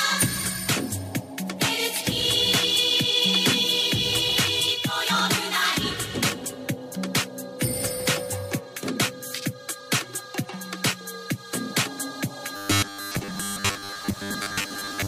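From 12.56 s to the end at 15.07 s, the sound turns into a rigid metallic buzz at 100 Hz: robotic sound from repeated short buffers. The likely cause is audio arriving too seldom, so a roughly 10 ms slice is looped while most of the real signal is skipped.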